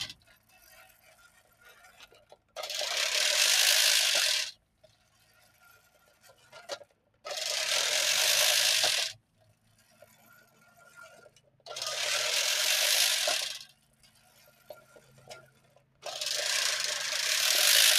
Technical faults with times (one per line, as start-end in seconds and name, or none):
0.00-17.98 noise suppressor applied to music or sounds
0.18-1.63 sound cut by the noise suppressor
2.23-2.56 sound cut by the noise suppressor
4.56-6.53 sound cut by the noise suppressor
6.85-7.24 sound cut by the noise suppressor
9.19-10.76 sound cut by the noise suppressor
11.29-11.65 sound cut by the noise suppressor
13.73-16.03 sound cut by the noise suppressor